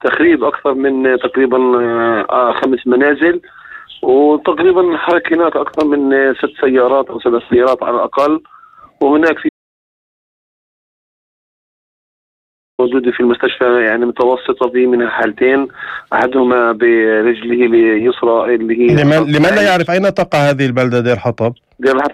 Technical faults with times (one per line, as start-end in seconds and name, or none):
9.49-12.79 audio dropout to silence